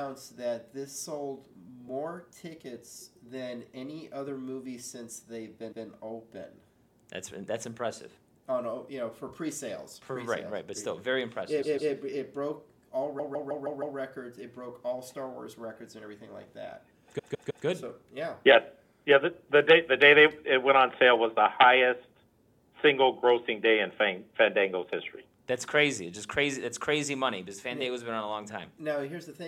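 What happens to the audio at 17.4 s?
Repeated frames cause a stutter between 17.18 and 17.65 s. A short block of about 157 ms is played again three extra times. The sound jumps back and restarts from the same point on each pass. The block length fits a run of about six compressed frames that were written or sent more than once. The decoder then simply replays them. The clip runs about 0.47 s longer as a result.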